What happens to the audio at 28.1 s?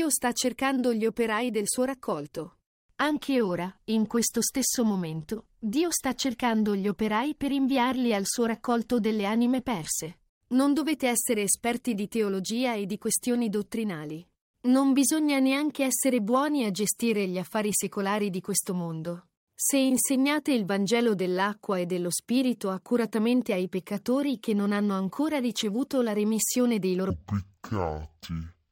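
At 28.1 s the playback is in a stereo read as mono fault, running from 27.10 s after "ricevuto la remissione dei" to the end of the clip. The left and right samples, which alternate in the stream, are being taken one after another as a single channel, so each second of audio is stretched over two. The speech drops to half speed and falls a full octave, sounding slow and deep, with a faint mirrored copy in the upper half of the spectrum.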